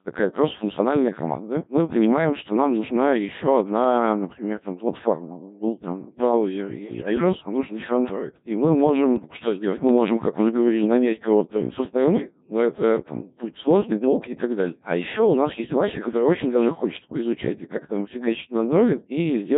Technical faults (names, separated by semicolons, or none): Codec 2 vocoder; bit errors on digital voice radio